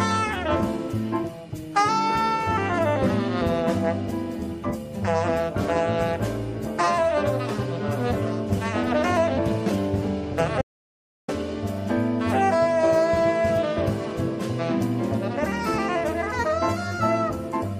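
At 10.62 s the audio drops out to silence for about 0.67 s, returning at 11.28 s. The gap is dead silent, with no room tone. That sets it apart from a quiet passage or a gated fade. The input was likely lost or muted while recording continued.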